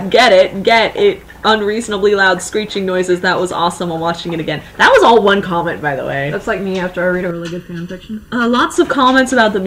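From 7.31 to 8.74 s the sound turns hollow and phasey, with a fixed, colored quality that stays put rather than sweeping. This is channel delay (comb filtering): one channel of the original pair arrives late by well under a millisecond, around 0.7 ms, and when the two are summed to mono, whatever they share cancels at evenly spaced frequencies, starting near 700 Hz and recurring above it, carving regular notches into the spectrum.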